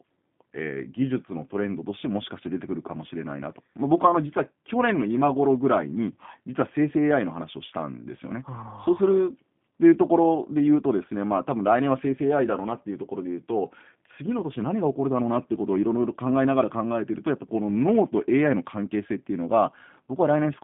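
From start to finish the speech carries G.729 codec damage: narrowband, slightly rough and synthetic, consistent with 8 kbit/s pulse-coded rebuilding. A spectrogram shows energy confined to 150 Hz to 3.5 kHz, with nothing above 3.7 kHz, and smeared, grainy harmonics.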